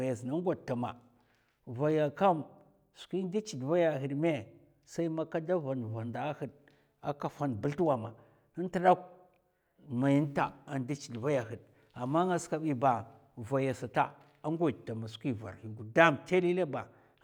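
No technical faults can be heard anywhere in the speech, so there is nothing to describe in time order.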